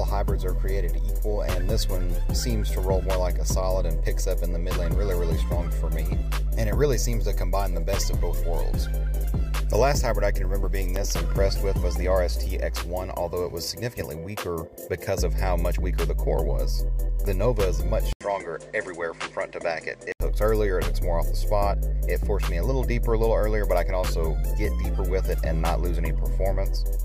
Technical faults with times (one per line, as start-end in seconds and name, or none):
18.13-20.20 input switched to a poorer device